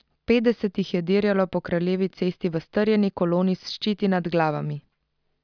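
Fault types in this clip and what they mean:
No faults heard in this clip.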